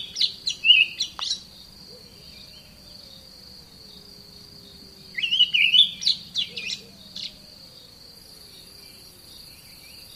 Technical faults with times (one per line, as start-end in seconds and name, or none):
none